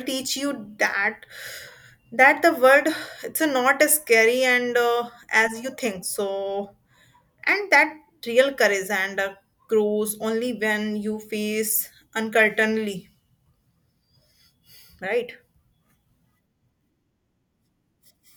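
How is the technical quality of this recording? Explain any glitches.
No technical faults can be heard anywhere in the recording, and the signal stays intact and continuous throughout.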